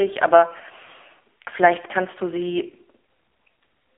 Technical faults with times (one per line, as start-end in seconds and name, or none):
0.00-3.98 AMR narrowband mobile codec